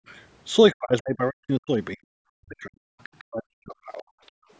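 Speech passed through a call's microphone processing, whose band tops out at 8 kHz. Background gated by the echo canceller appears at 0.0 to 0.07 s and again at 4.33 to 4.5 s. The room tone drops by about 40 dB for roughly 70 ms and then roughly 150 ms before recovering. The canceller, hearing its loudspeaker active, clamped the microphone hard and released it a moment later. Speech suppressed in double talk runs from 0.73 to 2.88 s and from 3.2 to 4.05 s. The talker's level sinks by as much as about 40 dB, in pieces totalling roughly one and a half seconds in the first stretch and about a second in the second. The likely cause is both parties talking at once, so the canceller could not tell the local talker from loudspeaker echo and attenuated everything. The other side's voice leaking through is audible at 3.03 to 3.24 s, about 25 dB below the talker, and at 3.93 to 4.31 s, about 35 dB below. 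It sounds like a faint second voice, most likely far-end audio from the device's loudspeaker that the echo canceller failed to remove fully from the microphone signal.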